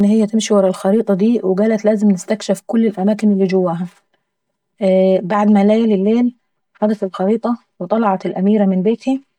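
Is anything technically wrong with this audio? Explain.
Yes. Channel delay (comb filtering) runs through the whole speech clip: one channel arrives roughly 5 ms late, and summing to mono cancels shared content at evenly spaced notches starting near 100 Hz, leaving the sound hollow and phasey.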